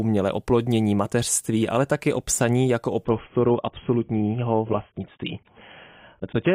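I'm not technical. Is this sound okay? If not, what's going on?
No. At about 3.05 s, right after "o psaní jako o", the speech suddenly goes dull and fizzy until the end. That's an adaptive stream switching to a lower bitrate: the connection slowed, so a smaller, rougher version played, with nothing above about 3.8 kHz.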